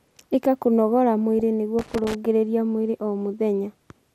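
Throughout, the speech sounds dull and plainly gurgling, with a granular edge and upper bands that seem to flicker. This is MP2 compression, likely at a rate around 80 kbps, where too few bits force upper sub-bands off and coarsely quantise the rest.

At about 1.39 s a brief burst of burbling flares over the speech. This is DAB burbling: a small number of bit errors slipped past error correction into the MP2 data, putting short blips of noise into individual sub-bands for what sounds like a few frames.

From 1.79 to 2.15 s, just before "mwĩrĩ o", an irregular burst of scratchy crackle breaks into the signal. This is loose connector crackle, where a worn or dirty contact rapidly makes and breaks, chopping the audio into ragged fragments for about a third of a second.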